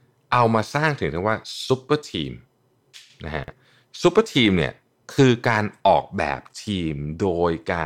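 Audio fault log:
3.44–3.52 s, chunks out of order: Two short stretches of the speech play in swapped order. Each is about 40 ms long. One of them arrived or was written one chunk late, so it plays after the chunk that should follow it. No audio is missing. The sequence is simply wrong. That leaves three hard joins where the waveform does not line up. Together they make a brief, jumbled stutter.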